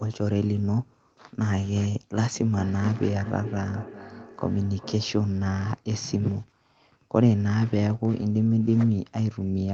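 Speech that picks up a trailing repeat from 2.33 to 5.25 s, each phrase returning roughly every 0.4 s at up to about 13 dB below the voice. It's feedback echo between two devices: one device plays the call aloud, the other's microphone recaptures it, and neither echo canceller removes the other's playback.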